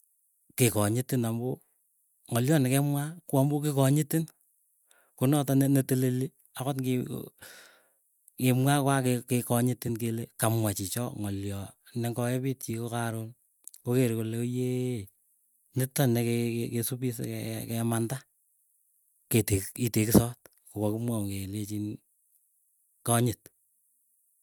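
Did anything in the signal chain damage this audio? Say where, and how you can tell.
No, nothing in the signal chain audibly damaged this speech recording; the signal stays intact and continuous throughout, with no audible disturbance introduced at any stage.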